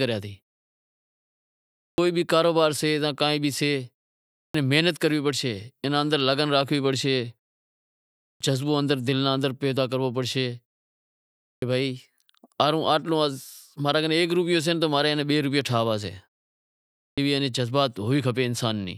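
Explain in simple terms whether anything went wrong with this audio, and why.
Five times, speech jumps in abruptly out of silence with its opening sound missing. This happens at 1.91 to 1.98 s, just before "بھی کاروبار", then at 4.47 to 4.54 s, 8.33 to 8.41 s, 11.56 to 11.62 s and 17.11 to 17.18 s. This is a clipped start after a pause. During each pause the playback device dozes off and needs about 60 to 75 ms to wake, so the first sound that follows is lost.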